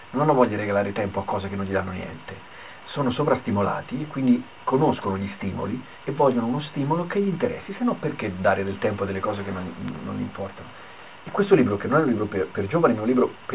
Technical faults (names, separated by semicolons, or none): none